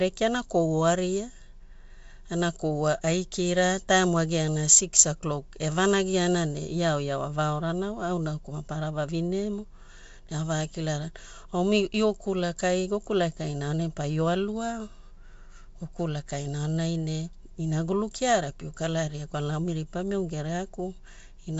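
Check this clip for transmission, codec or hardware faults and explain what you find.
Two short faults are audible, both bit errors on an ADPCM link. The first runs from 6.69 to 6.73 s, just after "evanagiana ne". The second is a brief click at 18.13 s, between "aonai ne inagulu" and "kiara pio kalaria kwalana". A flipped bit upsets the decoder's step size and predictor. The error then rings on for a few milliseconds before the decoder recovers. Each event sounds like a pop with a rough burst and a brief change in level. The error rate is low, around 0.1 to 0.15 percent. The wideband coding itself sounds clean, which fits G.722 at 64 kbit/s.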